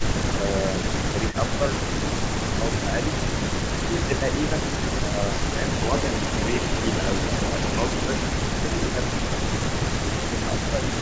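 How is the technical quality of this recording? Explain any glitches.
The recording has two recurring call-audio problems. The talker keeps getting ducked, and the voice played on the loudspeaker comes back as echo.

Speech suppressed in double talk shows up from 0.0 to 2.97 s, 3.86 to 5.59 s, 8.3 to 9.0 s and 9.99 s to the end. The level dips by about 10 dB, and by about 15 dB around 8.3 to 9.0 s. It's likely the echo canceller clamping down while both sides talked.

Echo leak comes in at 1.32 to 1.36 s as a faint scrap about 20 dB down, delayed about 0.42 s. Then from 5.67 to 8.22 s it's much stronger, about 5 dB under the speech and trailing by about 0.39 s. The likely cause is a loudspeaker-side canceller letting pickup through. Everything sits under the G.722 call path's 8 kHz ceiling.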